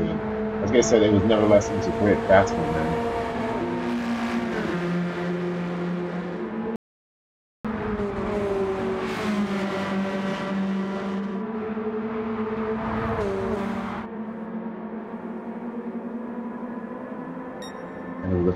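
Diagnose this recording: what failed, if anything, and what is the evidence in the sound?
An audio dropout to silence runs from 6.76 s to 7.65 s, removing about 0.89 s of material. The sound is cut off abruptly mid-flow and resumes just as suddenly, and the gap is silent, with no room tone or noise floor at all. That total silence separates it from a natural pause or a noise gate, which would leave some residual hiss or fade. The likely cause is a lost input at the wiring or device link while the recorder kept writing zeros.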